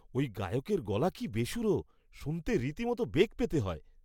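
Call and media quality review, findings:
No faults found in the speech recording. Nothing heard that points to any component in the chain.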